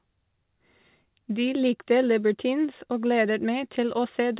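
Nothing stood out on listening to this speech, which has the narrow telephone-band sound of a G.711 mu-law call path with nothing above 4 kHz.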